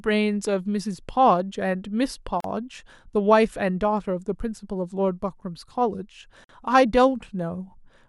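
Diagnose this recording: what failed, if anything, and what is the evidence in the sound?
The codec stage failed: there is a gap at a join of encoded pieces. The speech drops into silence from 2.40 to 2.44 s (39 ms) and again from 6.44 to 6.49 s (49 ms), spaced about 4 s apart, with smeared edges before the sound resumes where it left off. The audio was encoded in 4-second segments and joined untrimmed, so each segment's encoder start-up delay and final-frame padding remain as silence.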